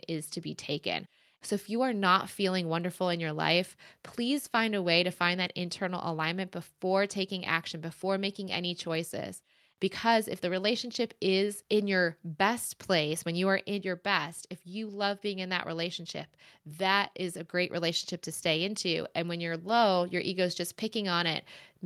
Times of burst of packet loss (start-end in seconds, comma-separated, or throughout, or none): none